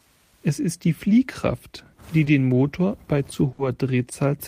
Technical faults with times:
2.25-2.30 short stall from a late packet
3.53-3.62 burst of packet loss

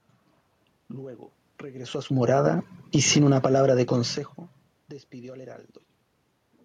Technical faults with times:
2.17-4.76 automatic gain falling

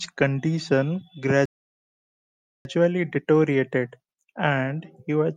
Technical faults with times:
1.45-2.65 playback stall

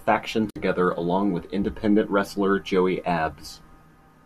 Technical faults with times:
0.50-0.56 digital broadcast dropout

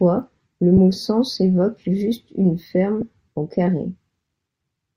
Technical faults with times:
0.77 lost LE Audio frames
3.01 lost LE Audio frames

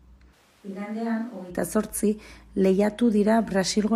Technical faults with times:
0.34-1.49 switch to a distant microphone

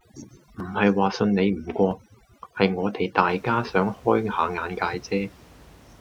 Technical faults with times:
0.00-3.28 overdone noise removal

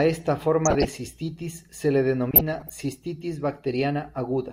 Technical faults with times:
0.65-0.89 DAB burbling
2.31-2.70 DAB burbling

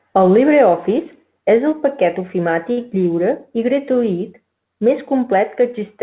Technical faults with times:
2.72-2.79 short stall from a late packet

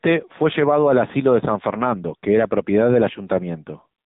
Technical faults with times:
0.00-4.06 AMR narrowband mobile codec

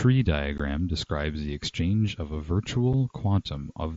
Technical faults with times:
0.58 unconcealed Bluetooth headset packet loss
2.93 unconcealed Bluetooth headset packet loss

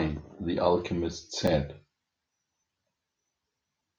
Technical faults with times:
1.47 block of digital silence

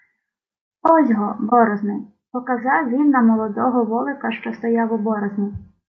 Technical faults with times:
0.00-5.89 low-delay AAC compression
1.49-1.53 AAC frame loss with muting

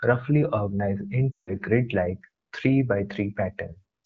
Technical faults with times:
1.32-1.54 lost AMR speech frames

